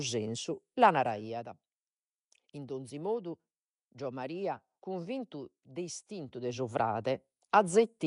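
Throughout this speech clip there is a rough, hissy halo and a smeared, underwater quality, with nothing above 10.6 kHz, likely from Nellymoser compression at a rate that fits about 44 kbps. Unlike the watery chirps of MP3, the emptied bands here are filled with noise, so the damage comes across as hiss rather than warbling.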